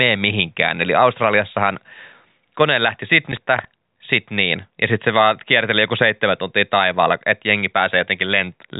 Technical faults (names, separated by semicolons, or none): processor overload crackle